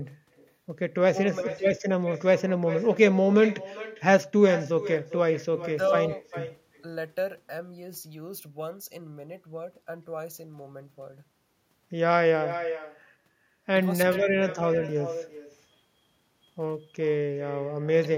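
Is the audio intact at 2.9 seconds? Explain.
No. At 2.9 seconds the speech carries an echo with no canceller, and it runs through the whole clip. Each phrase returns roughly 400 ms later as a fainter copy, about 12 dB below the speech. The far end is playing the call through a loudspeaker. Its microphone picks that sound back up. Nothing cancels it before it travels back. The returning copy sounds thin. It trails just behind the talker.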